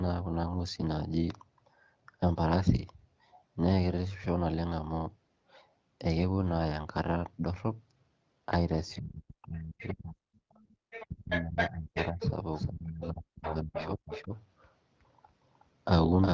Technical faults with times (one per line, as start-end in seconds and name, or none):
8.96-10.32 speech suppressed in double talk
9.42-9.47 other side's voice leaking through
9.81-9.93 other side's voice leaking through
10.60-10.76 background gated by the echo canceller
10.90-12.31 other side's voice leaking through
11.04-12.21 speech suppressed in double talk
12.54-16.33 doubled audio track
12.69-14.34 speech suppressed in double talk
13.45-14.23 other side's voice leaking through
13.78-13.90 AMR bit errors
16.02-16.08 AMR bit errors